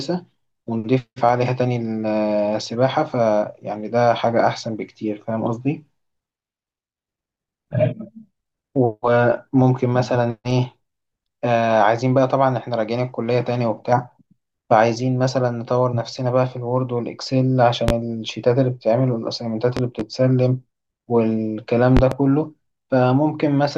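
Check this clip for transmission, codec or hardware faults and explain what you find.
Loud pops at 17.88–17.92 s (single), 19.77–20.03 s (double, about 15 dB above the speech) and 21.97–22.15 s (double, about 20 dB above), likely from a voltage pulse. The speech carries on underneath, unlike a dropout click.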